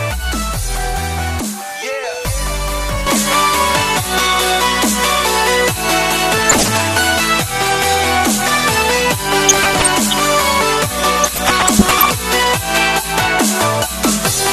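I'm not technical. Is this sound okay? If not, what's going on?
No, not quite. There are three separate problems.

All the way through there's a dull, gurgly, grainy quality, which most likely comes from MP2 compression. That's the older squeeze method used in digital radio. It chops the sound into narrow slices and, when it's short on space, turns some of the upper slices off and handles the rest crudely. The result is a muffled sound with a bubbly grit on top, and it's clearly noticeable here.

At about 3.07 s the character of the sound changes and stays that way to the end. This is most likely an input switched to a poorer device, meaning the recording jumped over to a different microphone or headset partway through. There's no gap at the switch. From then on the top end is cut off, with nothing above about 13 kHz, the level shifts a bit, and a faint new background noise creeps in.

There are also three short bursts of DAB burbling, at 6.37–6.78 s, 9.49–10.14 s and 11.22–12.13 s, with the last being the longest at nearly a second. 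That's what weak digital radio reception does. Corrupted data slips past the error correction, so individual slices of the sound get short blips of noise. You hear it as a bubbling, watery blipping.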